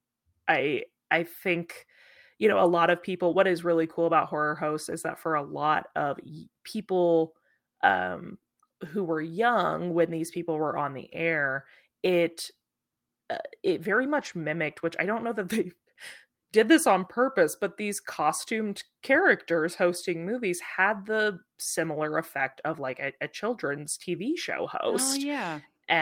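At 4.91–4.93 s, between "cool about horror hosts" and "that for a lot", the speech briefly turns rough and noisy, a lost packet rebuilt from error correction. The packet following the lost one carried a low-bitrate copy that the decoder played in its place, so there is no gap. The same happens at 8.85 s, after "lot of people um". At 14.17–14.31 s, after "uh it very", the roughness lasts about 80 ms, consistent with four separate packets rebuilt this way. Shorter instances follow at 20.03 s and 25.07–25.13 s.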